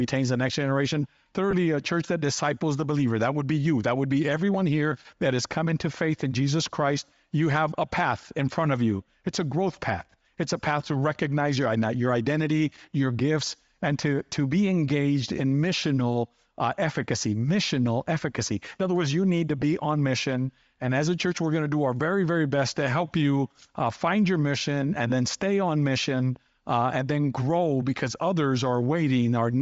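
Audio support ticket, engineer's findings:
Breathy, grainy edge on the speech throughout, upper band thin and hissy. Bluetooth LC3 compression, likely cause: low-rate LE Audio encoding zeroes upper spectrum and fills it with noise; the damage fits roughly 32 kbps in 10 ms frames.

Lost LE Audio frames: brief noisy smear, 1.51 to 1.54 s and again at 19.62 s. Fits a 20 ms gap and a 10 ms gap. The LC3 decoder concealed the missing frames by repeating the last spectrum with random signs, smearing the speech.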